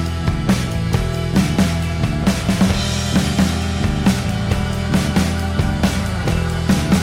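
No technical faults are audible.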